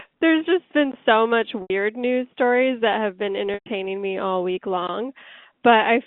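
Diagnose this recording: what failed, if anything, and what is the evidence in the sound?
At 1.62 s and 3.54 s the speech briefly holds on a repeated pitch that fades into silence, over gaps of 80 and 120 ms: network packet loss concealed by pitch repetition.

A short hole at 4.87 s marks a 17 ms block of digital silence, an abrupt cut to silence and back, pointing to the driver or buffer stage.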